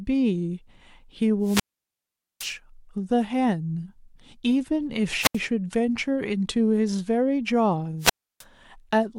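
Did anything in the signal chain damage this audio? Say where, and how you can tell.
Yes. Wireless microphone squelch dropouts at 1.41–2.55, 5.18–5.40 and 7.99–8.44 s: the analogue radio link fades, hiss rises, then the receiver's squelch mutes for 0.81, 0.08 and 0.31 s.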